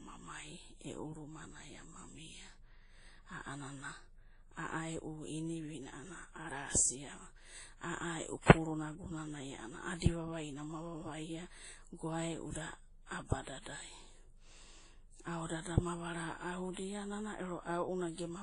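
Throughout the speech, two layers of compression smearing sit on top of each other, with a swirling, watery texture and nothing above 10.1 kHz. This is likely transcoding between lossy codecs, which fits a low-rate WMA encode re-encoded to Vorbis at around 24 kbit/s.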